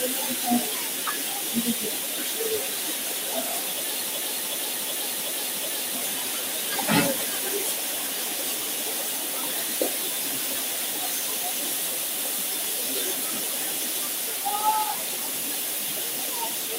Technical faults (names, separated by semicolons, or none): system hang loop